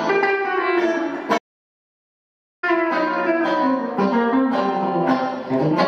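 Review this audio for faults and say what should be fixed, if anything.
A playback stall runs from 1.37 s to 2.64 s: the sound stops mid-flow and the output stays silent for about 1.25 s before it continues. The likely cause is the player running out of data or having its thread blocked until it could recover. A brief dropout lasts only milliseconds; this silence is long enough to hear as a full halt. Giving the player a deeper buffer and keeping its audio thread free of blocking work would prevent it.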